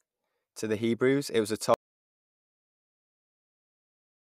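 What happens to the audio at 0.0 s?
Nothing goes wrong at 0.0 s; the audio is intact, with no audible fault at that moment.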